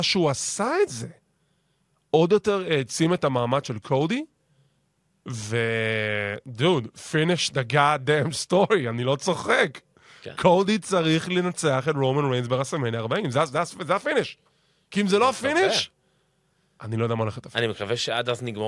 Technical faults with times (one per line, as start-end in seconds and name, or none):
none